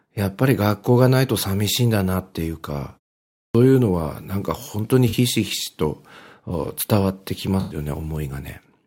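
At 3.43 s, after a half-second pause, there's a clipped start: the output device dozed off, so the first 116 ms of speech gets swallowed and the line jumps in abruptly. Then there's AAC frame loss with concealment: at 5.08 s a 43 ms gap, fitting two lost frames, gets patched into a brief smeared, phasey blip, and at 7.60 s a longer 107 ms hole, five lost frames, is filled in from the last good audio the same way.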